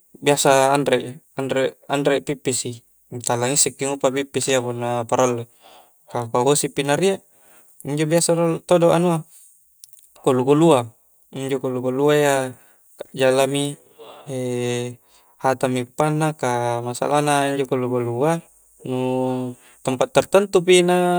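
Listening through the speech, nothing stood out as a technical problem at any point.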